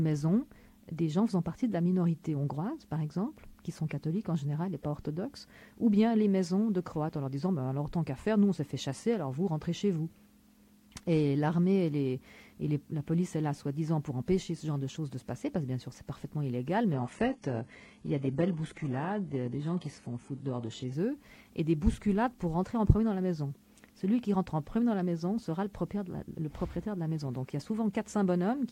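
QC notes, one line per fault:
16.93–20.93 s adaptive stream at a lower bitrate: an abrupt switch to a much lower-bitrate version leaves the treble thin. The spectrogram shows a flat ceiling at 11.5 kHz, with no gap in the waveform.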